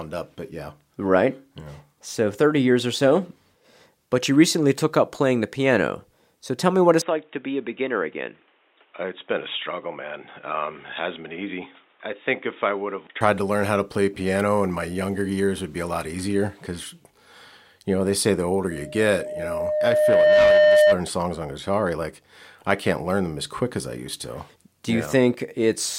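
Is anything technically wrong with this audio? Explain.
Yes, there are two faults in this speech recording.

From 7.02 s to 13.21 s the sound abruptly turns dull and boxy: nothing reaches above 3.8 kHz, the level falls by about 5 dB, and a new background noise sits roughly 35 dB under the speech. The change happens with no gap, which points to the system's input likely having switched to a poorer device, such as another microphone or a headset's call profile, with its narrower bandwidth, different gain and different self-noise.

From 18.71 s to 21.00 s a loudspeaker feedback squeal appears. A steady tone at 607 Hz swells over about a second and a half until it sits about 10 dB above the speech. A microphone is picking up the loudspeaker it feeds, and at 607 Hz the loop gain exceeds unity, so that single frequency keeps reinforcing itself each time it goes around the loop.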